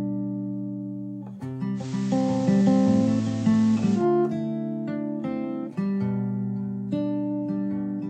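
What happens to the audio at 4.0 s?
The music is near the end of a digital radio blending to analogue episode, 1.74 to 4.06 s: the receiver has fallen back to FM, so hiss sits about 25 dB below the signal, then cross-fades back over 115 ms. A spectrogram shows the hiss floor; the waveform, a level step of about 1 dB.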